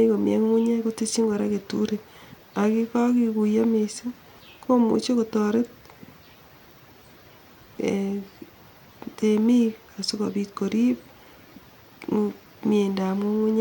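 No technical faults can be heard anywhere in the recording; the signal stays continuous throughout.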